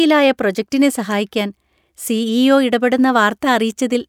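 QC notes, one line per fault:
Nothing stood out as a problem on listening.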